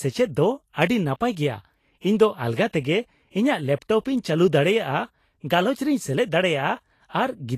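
From start to finish the speech has a hissy, grainy treble, nothing above 14.2 kHz and blurred onsets, likely from Vorbis compression at a rate that fits 36 kbps. Coarsely quantised treble detail becomes noise of similar energy, so it sounds grainy rather than watery or warbling.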